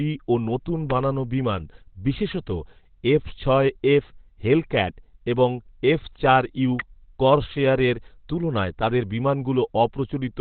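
From the start the speech sounds muffled and hoarse, with nothing above 4.3 kHz. This is likely Opus compression in its narrowband speech (SILK) mode, at a rate that fits around 12 kbps. On a spectrogram a flat ceiling cuts off all energy near 4.3 kHz.

At 6.80 s, between "এবং এফ চার ইউ" and "করসেয়ারের তুলনায় তাদের", a sharp snap lands on top of the speech. It is an electrical switching spike lasting about 5 ms, likely from an arc on the line. The waveform shows a narrow vertical spike, and the spectrogram shows a thin vertical stripe.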